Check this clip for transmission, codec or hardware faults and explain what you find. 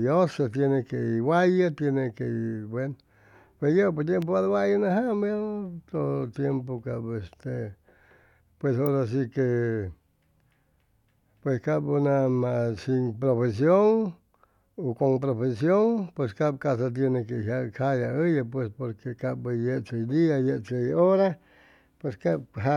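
Two brief electrical switching spikes interrupt the speech, at 4.22 s and 8.86 s. Each is a sharp snap laid over the speech, peaking at roughly -20 dBFS. The likely cause is a nearby switch, motor or static discharge arcing, with the audio line picking up the burst. On a waveform each shows as a narrow vertical spike. On a spectrogram it is a thin full-height stripe spanning all frequencies.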